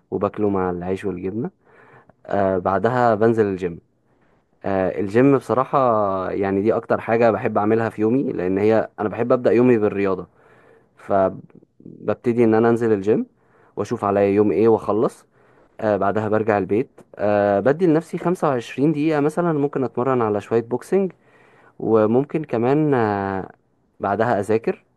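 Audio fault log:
No faults heard anywhere in this speech recording.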